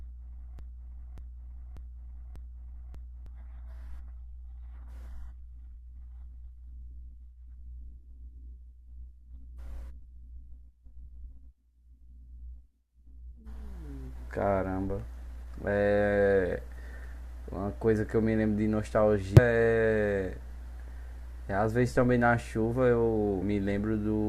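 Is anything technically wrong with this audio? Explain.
Yes, the speech has two kinds of fault. From the start to 3.26 s, a broken-record loop, already under way, repeats one 0.59 s fragment exactly, five times in a row. A stalled player or stream likely kept resending its last buffer, and the audio meant for that stretch is lost. Unlike a stutter, the repeats are identical and back to back. Damaged data in a compressed stream causes short glitches at 5.74 s, 9.99 s, 19.37–19.39 s and 23.41 s, where the decoder lost frame sync. Each is a single brief blip rather than a repeat.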